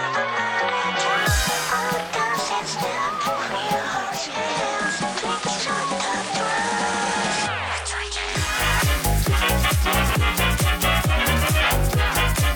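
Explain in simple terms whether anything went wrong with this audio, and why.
From 3.95 s to 8.73 s, this is digital radio blending to analogue: the receiver lost its digital signal and faded across to the FM version. Faint hiss appears, and a half-second fade at each end separates it from a hard dropout.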